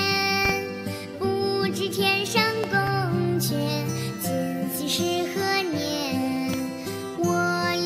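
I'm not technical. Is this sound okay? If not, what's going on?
No. There are three loud pops. The first, at 0.45 to 0.52 s, is two pops close together. The second, at 2.64 to 2.90 s, is also a pair. The last, at 6.53 to 6.56 s, is a single pop. Each one is sharp and much louder than the sound around it, which carries on underneath. A sudden jolt of electricity likely caused them, for example from a cable being plugged in, a switch, or static.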